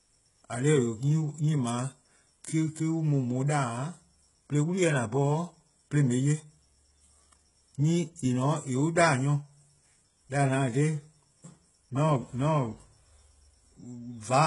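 Speech with HE-AAC compression throughout, likely at heavy damage near 12 kbps. Unlike a plain low-pass, the treble up to 11 kHz is still bright but rebuilt by band replication, so s sounds come out gritty and metallic rather than dull.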